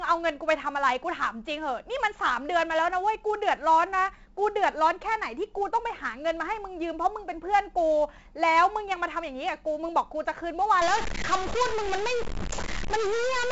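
From the start, the speech carries heavy 4-bit ADPCM compression. Each sample is coded as a small step from a predicted value, so the coding error rises and falls with the signal. Loud syllables get a gritty hiss that vanishes in quiet moments, and sharp onsets smear. Nothing reaches above 7.7 kHz, and the 64 kbps rate fits 4-bit samples at a 16 kHz sample rate. Unlike a perceptual codec's swirly, watery artefacts, the damage here is plain broadband grit tied to loudness.

At 10.82 s a new noisy distortion appears on top of that and lasts to the end. It no longer follows the loudness of the speech: the pauses also fill with noise. The likely cause is a stuck bit, one data line held at a fixed value so that many samples land off by a fixed amount. Clipping or overload would leave silent gaps clean, and noise that persists through the gaps points to a stuck bit.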